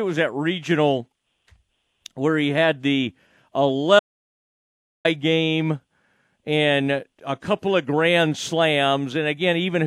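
An audio dropout to silence runs from 3.99 s to 5.05 s in this speech, removing just over a second of sound. The talking stops abruptly mid-flow and resumes just as suddenly, and the gap between is dead digital silence with no room tone or hiss underneath. That points to the input signal being lost, most likely through a disconnected device, a broken link or an accidental mute, while recording carried on writing silence.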